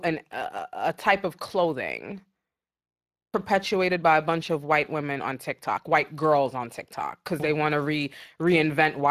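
Speech runs through Speex codec damage from start to finish, and it is plainly audible: the voice carries a hoarse, grainy roughness because the CELP coder cannot spend enough bits to reproduce the excitation faithfully. The degradation fits a bitrate of around 22 kbps. On a spectrogram, the harmonic striations look smeared, with a noisy haze filling the gaps between them. The waveform keeps its normal envelope, but fine cycle-to-cycle detail is coarsened.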